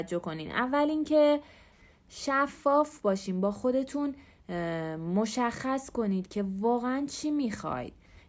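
Speech, with nothing technically wrong with it.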